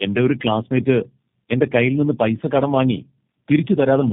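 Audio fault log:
throughout: tandem speech coding. The call passed through three low-rate speech codecs in a row, likely AMR-NB twice and then G.729A, each re-encoding the last one's damaged output. Errors stack, so the speech sounds rough, muffled and warbly, with nothing above 3.5 kHz.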